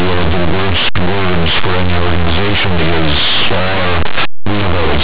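Linear audio read as companded runs through the whole 5-second speech clip: plain linear 8-bit samples are decoded as mu-law codes, so values just on one side of zero become the largest outputs while those on the other side stay small, giving very loud, harsh distortion.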